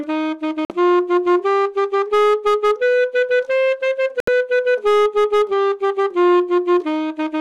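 At 0.65 s the sound cuts out for 0.06 s in a digital broadcast dropout. The receiver lost the stream or rejected corrupted frames and muted until clean data returned, so what was sent in that gap is gone. The roughly 48 ms hole fits two lost frames of about 24 ms each. On a waveform it is a flat line. On a spectrogram it is a blank vertical strip across all frequencies.

From 1.98 to 2.72 s, hard clipping sets in. The signal is pushed about 6 dB past what the stage can carry, so every peak is sheared off flat. This is heard as a harsh, gritty fuzz on the louder moments. The waveform shows squared-off plateaus. On the spectrogram, bright harmonic smearing rises well above the normal content.

A second dropout, at 4.20 to 4.28 s, leaves a silent gap of about 72 ms, consistent with three lost frames. It again shows as a flat trace and an empty band.

The clipping returns from 4.86 to 6.34 s, again about 6 dB of overdrive. 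It brings the same fuzzy harshness, flat-topped peaks and dense high-frequency haze.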